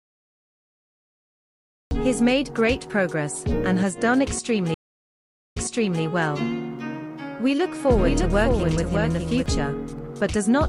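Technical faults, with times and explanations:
0.00–1.91 s, cut-off start: the clip holds digital silence until 1.91 s, and the sound then appears already in progress, with no natural attack or fade-in. The recording or stream began late, catching a sound partway through. The entry is a hard edge rather than an onset, because everything before the cut point simply was never captured.
4.74–6.03 s, stream reconnect: the audio drops to silence for about 0.79 s, then resumes at a point roughly 0.5 s earlier than where it stopped, so a short stretch is heard again. The connection broke, the player went quiet, then reconnected and started a fresh decoder mid-stream, and the server resent a burst of already-played material. The first frame after the gap fades in instead of starting at full level.
7.66–9.46 s, doubled audio track: a second full-band copy of the same sound runs about 0.7 s behind the original and about 5 dB quieter. 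It has no decay tail or room colour, which sets it apart from an echo, and it switches on and off abruptly at the edges of this span. The likely cause is the audio being captured again through a slower path, or an edit holding two copies out of step.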